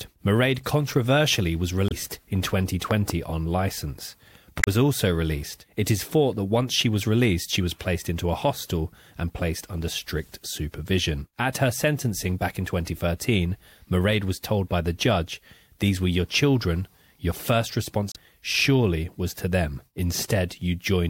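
A speech recording with damaged data in its compressed stream at 1.87–1.92 s (just after "controversially was"), 4.60–4.68 s (between "on license" and "also released") and 18.12–18.16 s. Each is a brief disruption where the decoder loses frame sync and jumps to the next header; a spectrogram shows short smeared broadband blocks and abrupt discontinuities. A loud pop, two sharp clicks roughly 15 dB above the speech, occurs at 2.91–3.12 s, before "on license", likely from a plug, switch or static discharge. It appears as twin tall spikes in the waveform and vertical full-band lines on a spectrogram, with the speech continuing underneath.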